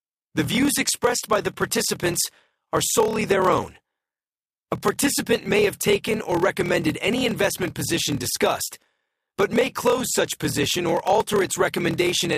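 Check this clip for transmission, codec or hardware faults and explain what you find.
One fault is present: a block size mismatch (padded), running through the whole speech clip. One stage hands over blocks shorter than the next stage expects, which fits 1024-sample writes, and the shortfall in each block is filled with silence. That repeated gap produces a steady buzz at about 38.3 Hz, and because every block is stretched with zeros, the speech plays at 0.889 times its normal speed while keeping roughly its normal pitch.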